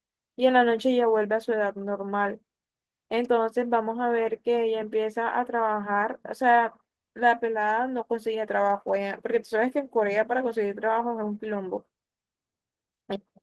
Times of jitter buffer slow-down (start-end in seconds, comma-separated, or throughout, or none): none